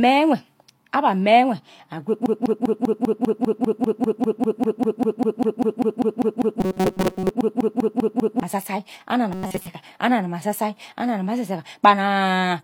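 Speech, and it gets stuck badly: from 2.26 s to 8.43 s there's a broken-record loop, with the same 198 ms fragment playing back to back, 31 times over. Whatever was said during those six-odd seconds is simply gone. What you're hearing is most likely the player, encoder or stream stalling and re-sending the last chunk it had. On top of that there's robotic sound from repeated short buffers at 6.60 to 7.30 s, inside the loop, and again at 9.33 to 9.67 s. Both stretches carry a rigid metallic buzz at 188 Hz that only loosely follows the underlying speech, since most of the audio in those spans is repeated filler rather than real signal. A 188 Hz repeat rate fits a buffer of roughly 5.3 ms being replayed whenever fresh data doesn't arrive in time, with the real audio in between skipped. That's the likely cause.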